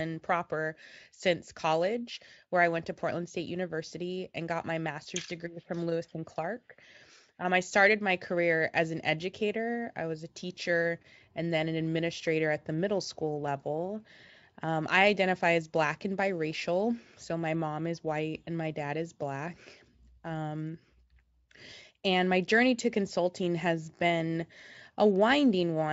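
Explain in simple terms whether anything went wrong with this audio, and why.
Nothing went wrong with this speech recording, because there is no fault to point to anywhere in it.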